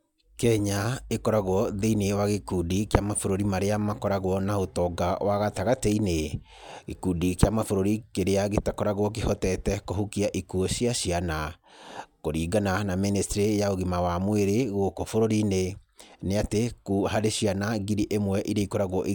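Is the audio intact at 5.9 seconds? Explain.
No. At 5.92 s, just after "makoragwo na ũtonga wa", a sharp snap sits on top of the speech, peaking at about -20 dBFS. This electrical switching spike is likely a nearby switch or static discharge arcing briefly and being picked up by the audio line.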